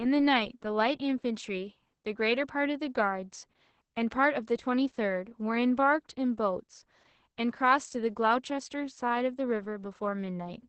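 The speech carries Opus voice compression from start to finish, and the damage is heavy: it sounds muffled, hoarse and faintly robotic, pointing to the SILK linear-prediction mode at a rate near 10 kbps coding the excitation coarsely. On a spectrogram, energy stops at a flat wideband ceiling around 8.7 kHz, and below it the harmonic bands look smeared and blotchy instead of cleanly striated.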